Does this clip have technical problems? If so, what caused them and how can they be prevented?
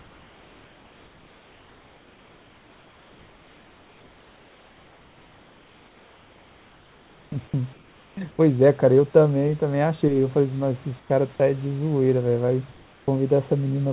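Yes. Comfort noise in place of the background appears from 0.0 to 8.67 s, 11.00 to 11.10 s and 12.72 to 13.08 s. The real room sound turns steady and featureless, about 8 dB and 6 dB quieter in the later two. Discontinuous transmission is the likely cause. Disabling it at the sender prevents this.

Sound dropped by the voice detector occurs at 11.36 to 11.40 s. About 20 ms of sound vanishes into steady noise. The detector likely judged it background and stopped sending. Lowering its threshold or adding hangover time prevents this.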